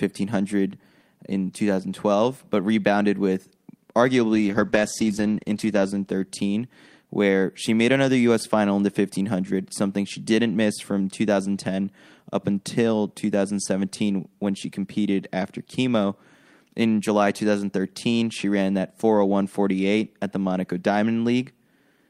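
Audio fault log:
4.36–6.97 s call bitrate drop: the speech turns rough and muffled as the encoder is starved of bits, which fits a fall from about 40 to 12 kbps. Coarser coding and lost highs bottom out for about a second, clearing before "where she made another".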